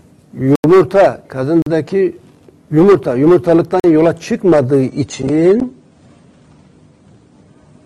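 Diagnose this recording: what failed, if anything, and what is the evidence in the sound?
Blocks of digital silence at 0.56 to 0.64 s (85 ms) and at 1.62 to 1.66 s and 3.80 to 3.84 s (43 ms each). This is a driver or buffer stage failing to fill output in time. The lengths fit 4096- and 2048-sample buffers.

Adaptive stream at a lower bitrate from 4.88 s to the end. The quality drops abruptly with no gap. Nothing sounds above 9.7 kHz, and codec artefacts rise. This points to a network slowdown forcing a switch from roughly 96 to 32 kbit/s AAC.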